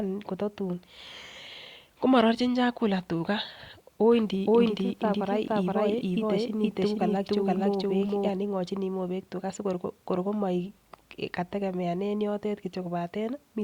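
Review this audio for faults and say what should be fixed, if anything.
From 4.11 s to 8.29 s there's a doubled audio track: a dry copy of the speech trails about half a second behind at roughly equal level, cutting in and out abruptly, likely from a second capture path or an out-of-step edit. Route only one input and check the timeline for overlapping copies.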